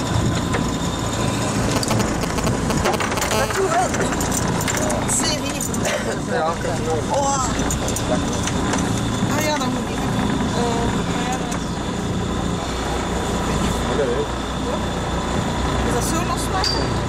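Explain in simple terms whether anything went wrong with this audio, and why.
Yes, two things went wrong, both caused by a mobile phone near the recording gear.

From 1.76 to 3.34 seconds there are GSM signalling bursts. You hear a galloping dit-dit-dit of short buzzes, roughly as loud as the recorded sound itself. An older 2G phone was exchanging brief radio messages with the network, the kind sent before a call or text comes in. The audio circuit picked up those radio pulses and turned them into short buzzes, each pulsing at about 217 times a second.

From 3.34 to 5.46 seconds this turns into a GSM phone buzz. It is a steady, harsh, raspy buzz at 217 Hz, quieter than the recorded sound. Now the phone was in an actual call, sending radio pulses continuously, 217 every second. The audio electronics again converted them into sound. That buzz has nothing to do with what was being recorded. 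It comes purely from the phone's transmitter.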